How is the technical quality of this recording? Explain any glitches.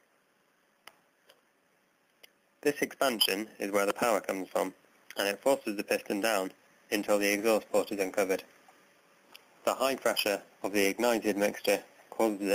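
The recording has one persistent fault: gain pumping across the whole clip. The level swings by roughly 10 dB. Loud and quiet passages sit closer together than they should, giving a squashed, breathing quality. The likely cause is input gain set far too high for the microphone, with a fast limiter or compressor clamping down on each peak and releasing in the pauses.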